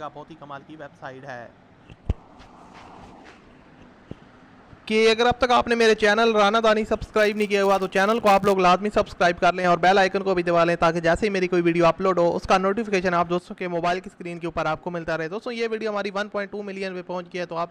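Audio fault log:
7.19–8.55 s: filter restarted on every block. A 100 Hz buzz rides on the sound and tracks its loudness, because the filter starts each block from silence and leaves a small transient at every boundary, which fits blocks about 10 ms long. A spectrogram shows thin vertical striations every 10 ms with energy at multiples of 100 Hz. The waveform shows tiny spikes at each block start.
9.50–9.64 s and 13.38 s to the end: one channel drops out. The level falls abruptly by about 6 dB, likely because one stereo channel is lost and the mono sum keeps only half of the shared content. The waveform envelope steps down to half its height with sharp edges, and the spectrogram dims evenly across all frequencies.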